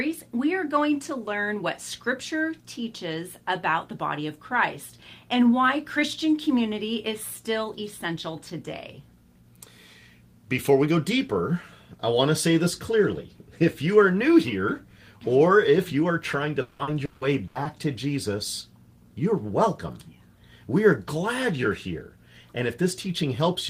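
From 16.61 to 17.67 s, repeated packet loss left five gaps, up to 180 ms, patched by extending prior sound, giving choppy, robotic audio.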